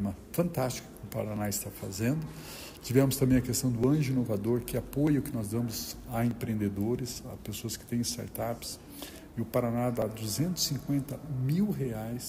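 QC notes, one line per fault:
0.13–11.26 s, clock drift buffer slips: a short click or pop recurs at a steady 1.24 s interval across this span, about ten in all. Each is a small discontinuity in the waveform, consistent with a block of a few tens of samples being dropped or repeated. The regular spacing likely comes from two devices on independent clocks about 500 ppm apart. The buffer between them creeps until it must slip, then starts drifting again.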